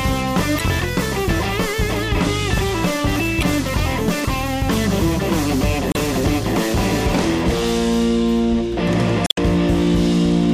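Damaged data in a compressed stream hits four times, at 0.56 to 0.62 s, 3.39 to 3.44 s, 5.91 to 5.96 s and 9.24 to 9.38 s. Corrupted bytes leave the decoder unable to read those frames, so it loses sync and hunts for the next valid frame header. Each break comes out as a short chirp, squawk, click or hole cutting into the sound, about 50 ms long for the first three and roughly 150 ms for the last.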